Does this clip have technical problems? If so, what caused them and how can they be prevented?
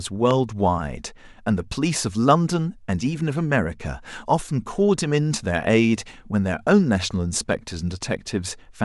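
Yes. A single loud pop sits at 0.31 to 0.33 s, very early in the speech, peaking around 15 dB above it. This is likely a voltage pulse from a cable being plugged in, a switch, static or a driver glitch, shaped by the circuits that follow into one thump. Unlike a dropout or digital glitch, nothing is missing: the speech continues intact underneath the burst. Make all connections and switch changes before recording starts, and ground equipment properly.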